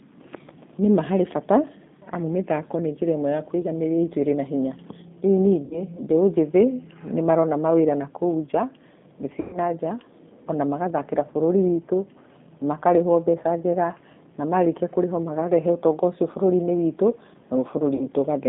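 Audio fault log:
throughout G.729 codec (G.729A at 8 kbit/s): the sound is held between 200 Hz and 3.6 kHz and rebuilt from a filter, pitch and pulse model, so it comes out plainly rough and synthetic. A spectrogram shows a hard ceiling at 3.6 kHz with empty bands above it.
5.65–5.82 s, 9.41–9.59 s, 17.95–18.08 s VoIP packet loss concealed by the speech codec: gaps of 60 ms, 120 ms and 60 ms, the middle one fitting about six packets, are filled by the decoder repeating its last pitch and filter at falling gain. The first gap comes just before "mbeũ njĩthĩ nĩ marona" and the second just after "nja thĩĩ". Each gap is stretched into a buzzy tone or coloured noise that fades, and the sound stays weak for a moment after it. A spectrogram shows flat, repeated harmonics that fade out, and the waveform shows a smooth decaying envelope with no speech detail.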